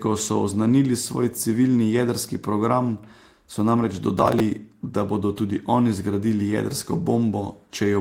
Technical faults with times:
4.19-4.40 processor overload crackle

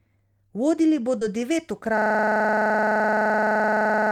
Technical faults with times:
1.19-1.23 short concealed packet loss
1.98-4.12 system hang loop

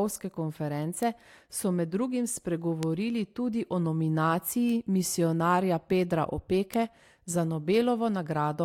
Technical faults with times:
1.03 bit error spike
2.83 bit error spike
4.69 bit error spike
6.74 bit error spike

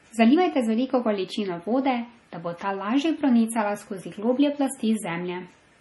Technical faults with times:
0.00-5.80 MP3 compression
2.03 dropped samples

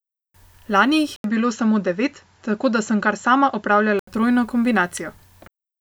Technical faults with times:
1.16-4.07 input switched to a poorer device

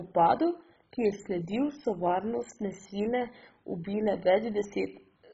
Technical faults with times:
0.00-5.33 MP2 compression

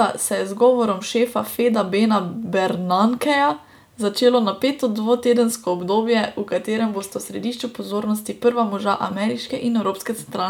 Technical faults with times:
none

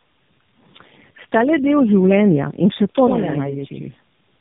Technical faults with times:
0.00-4.41 tandem speech coding
3.07-4.41 channel delay (doubling)

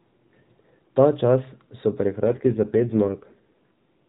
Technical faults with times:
2.24-4.03 AMR rate drop

